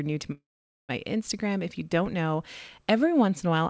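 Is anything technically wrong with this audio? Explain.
Yes. There is a call audio freeze from 0.32 to 0.91 s, just after "new to". The last sound trails off, then about 0.47 s of silence follows. The speech resumes where it stopped, with nothing lost. Everything afterwards runs 0.57 s late. Packets were likely delayed until the jitter buffer ran dry.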